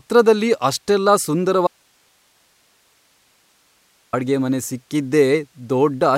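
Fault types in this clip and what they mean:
Audio dropout to a faint residue: the signal feed was likely interrupted while the path after the break stayed live, so the speech cuts out abruptly from 1.67 s to 4.13 s, leaving 2.46 s of faint hiss roughly 40 dB below normal level.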